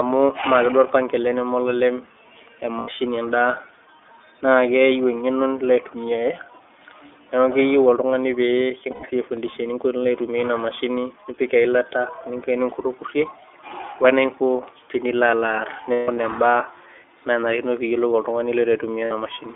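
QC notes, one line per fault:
Throughout, iLBC codec: narrowband 300 Hz to 3.5 kHz, plainly rough and synthetic timbre, fitting the 30 ms, 13.33 kbps mode; steady coding texture, not momentary dropouts.
2.78–2.89 s, 8.91–9.04 s, 15.92–16.17 s, 19.05–19.12 s, lost iLBC frames: gaps of 90, 120, about 180 (longest stretch around 150 ms) and 60 ms filled by a held, buzzy repeated pitch cycle, recovering almost instantly.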